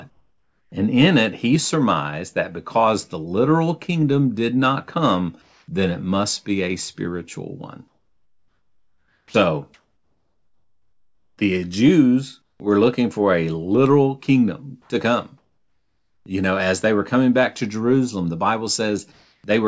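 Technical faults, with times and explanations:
0.1–0.72 s, 5.42–5.68 s, 7.88–11.38 s, 12.42–12.6 s, 14.82–16.26 s, 19.12–19.44 s, comfort noise in place of the background: pauses lose their natural detail and become a flat, featureless hiss, sometimes quieter, by about 10 dB at 12.42 s. This likely comes from discontinuous transmission, where the receiver synthesises noise while the sender is silent.
9.27–9.34 s and 12.58–12.6 s, onset clipped by the voice detector: sound starts abruptly, missing 70 ms and 20 ms of its soft beginning, the second just before "we're looking for a". The detector likely reacted late, so those opening moments were replaced by comfort noise.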